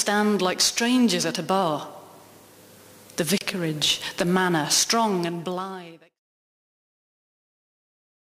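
At 3.38 s the sound drops out for about 30 ms, a brief silence with smeared edges, then resumes exactly where it left off. This is a gap at a join of encoded pieces: separately encoded sections of around 4 s were butted together untrimmed, so encoder start-up delay and end-of-frame padding stayed in. The later fade-out, from roughly 4.5 s to 6.2 s, is smooth and intentional.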